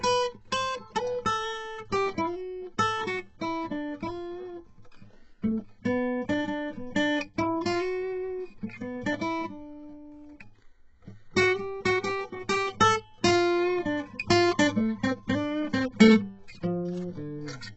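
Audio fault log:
Throughout: HE-AAC compression, likely. The music has heavy codec damage and nothing above about 7.9 kHz, and the treble below that edge sounds gritty and metallic. This fits a very low bitrate near 8 kbps, where only the lower spectrum is coded and the upper bands are copied up from below under a coarse envelope. A plain low-pass filter would sound dull, not brittle.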